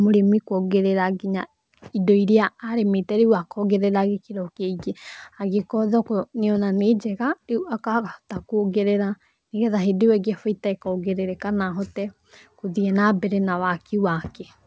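No technical faults can be heard anywhere in this speech.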